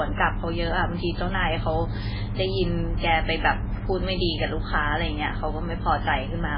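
MP3 compression runs throughout, likely from encoding at a very low bitrate, around 16 kbps. Nothing remains above 5.3 kHz, so the speech sounds dull, and weak frequency components flicker between frames, leaving a heavy watery, swirling texture with chirpy sibilants and smeared onsets.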